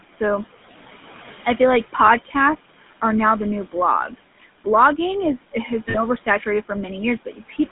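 Throughout, the GSM full-rate codec gives the speech a buzzy, gravelly roughness, consistent with 13 kbps GSM. A spectrogram shows energy confined between 150 Hz and 3.6 kHz. Noise suppressor artifacts also run through the whole clip. The background drops about 12 dB between words and rises beneath them, leaving a residue that appears as a patchy, blinking noise floor on a spectrogram.

At 2.06 to 2.09 s, just after "I feel like", a lost GSM frame replaces the sound with a repeat of the last good frame. It is heard as a brief metallic ring and shows as a short, uniform, repetitive stretch in the waveform.

From 2.25 to 2.35 s, speech cut by the noise suppressor dips the sound by up to about 15 dB. Part of the speech sounds swallowed, and a spectrogram shows thinned energy there.

Between 4.08 and 4.43 s, the suppressor again cuts part of the speech, up to about 14 dB in total over roughly a tenth of a second. 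It leaves a faint patch and a visible dip in the spectrogram.

At 5.90 to 5.96 s, after "is has", two lost GSM frames (40 ms) produce a longer rough, metallic hold.

From 7.25 to 7.71 s, the noise suppressor cuts speech once more, by up to about 14 dB over roughly 150 ms in total. Part of the speech sounds swallowed, and a spectrogram shows its energy thinned away.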